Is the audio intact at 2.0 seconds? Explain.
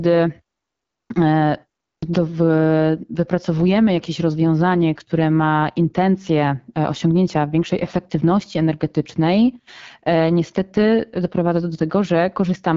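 No. A clipped start after a pause hits the sound from 1.95 to 2.03 s. After about 0.37 s of silence, the output device had gone idle and took time to wake and lock again, so roughly 75 ms at the onset never reached the listener. The sound jumps abruptly out of the silence, missing its opening sounds, as if its front edge had been sliced off.

The AMR wideband (HD Voice) codec also affects this moment, as it does the whole clip. The speech carries the rough, raspy grain of a low-rate mode, which fits the 8.85 kbit/s setting. The codec models the vocal tract from pulses up to 6.4 kHz and fills the band above with shaped noise, and nothing is present above 7.5 kHz.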